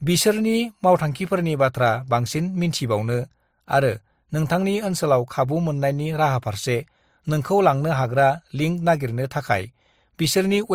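Transcoding between lossy codecs runs through the whole of this speech clip. Two layers of compression artefacts are heard together: a smeared, swirly high end typical of MP3, overlaid with a second codec's own coarseness. The character fits MP3 at about 63 kbit/s followed by Opus at about 48 kbit/s. The second encoder likely spent its bits reproducing the first one's damage and added its own, while the lower bandwidth limit from the chain remains.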